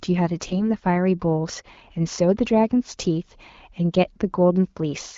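From 0.46 to 0.70 s and again from 4.15 to 4.22 s, AMR bit errors corrupt a few speech frames. Flipped low-priority bits misplace excitation pulses and skew gain and spectral values. Pitch and level hold, but the sound turns hoarse and gargly. A spectrogram shows smeared, noisy harmonics, and the waveform shows ragged, irregular cycles.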